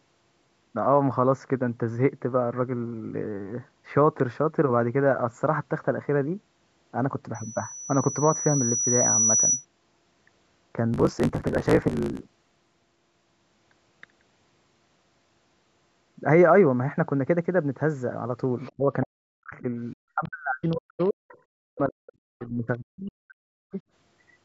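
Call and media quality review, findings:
Block size mismatch (truncated), 10.92–12.76 s. Steady buzz at 54.4 Hz and speech running 1.16x fast at about normal pitch, which fits a stage writing 1024-sample blocks into a reader taking shorter ones and discarding each block's tail. Unlike packet-loss gaps, the rhythm is strictly periodic.

Other side's voice leaking through, in four fragments: 18.61–18.72 s, 20.24–20.29 s, 20.65–21.41 s and 22.11–22.47 s. Levels run about 25, 35, 25 and 30 dB below the talker. This is likely residual echo from the talker's loudspeaker that the echo canceller did not remove. It differs from room crosstalk or a background talker because the fragments cluster where both ends overlap.

Speech suppressed in double talk, 18.77–23.77 s. The talker's level dips, deepest roughly 40 dB, for around 4 s in total, overlapping the leaked far-end fragments. The likely cause is the echo canceller ducking both signals while it fails to separate talker from echo. 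It differs from network dropouts because the losses track the far-end activity and are partial attenuation rather than clean silence. The lowest bass is removed, consistent with normal call microphone processing.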